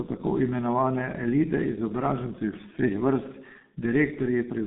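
Speech, and the whole thing has been squeezed through a G.723.1 codec with heavy damage from start to finish. Nothing gets past about 3.8 kHz, and the usable band runs roughly 150 Hz to 3.7 kHz, so it's boxy and muffled. The hoarse, smeared texture and soft consonants come from the codec's slow 30 ms frame updates at a very low rate, which fits something around 6.3 kbit/s.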